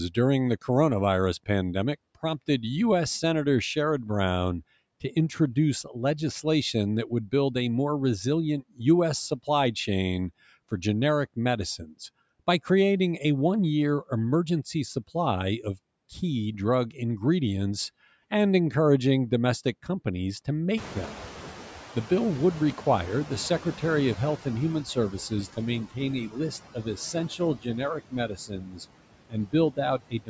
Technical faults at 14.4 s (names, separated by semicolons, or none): noise suppressor artifacts